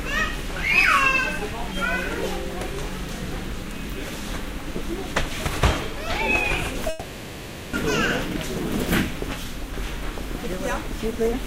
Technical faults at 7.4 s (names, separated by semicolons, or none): long network dropout